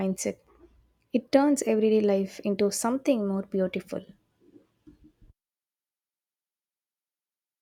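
No technical faults can be heard anywhere in this recording.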